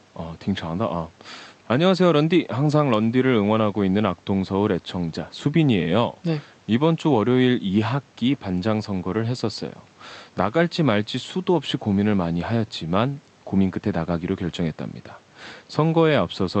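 Speech carried over a WebRTC call path with Opus coding, with no technical fault audible anywhere in the clip.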